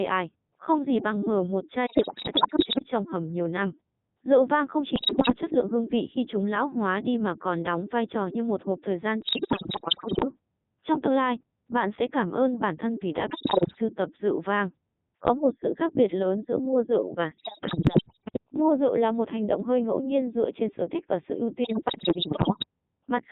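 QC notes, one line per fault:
Throughout: Codec 2 vocoder at 3.2 kbit/s, with band-limited audio around 200 Hz to 3.7 kHz. The speech is rebuilt from sine waves driven by pitch, voicing, energy and a spectral envelope, so the waveform is lost. The result is a heavily robotic, buzzy voice.
1.86–2.88 s, 4.96–5.36 s, 9.22–10.25 s, 13.30–13.81 s (after "bản thân vì đã", before "tập rượu vang"), 17.38–18.38 s (after "giữa mua rượu và"), 21.64–22.66 s (after "thích và sự ưu"): bit errors on digital voice radio. Corrupted frame parameters make the pitch, level and tone colour jump, so the voice breaks into warbles, bleeps and robotic gibberish. The error rate is roughly 10 percent, heaviest near 13.3 s and lighter near 21.6 s.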